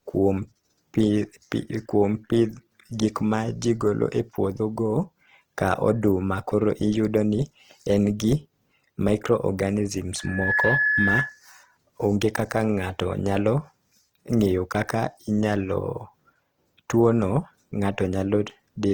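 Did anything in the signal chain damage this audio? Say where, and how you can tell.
Yes. At the codec stage, low-rate Opus compression, likely around 16 kbps, leaves the speech grainy, rough and noisy throughout, with bands filled by noise instead of clean detail.

At playback, a loudspeaker feedback squeal: the microphone re-captured its own speaker output, so a 1.7 kHz tone swelled within roughly a third of a second, from 10.18 to 11.41 s, about 5 dB above the speech, just before "onge kak".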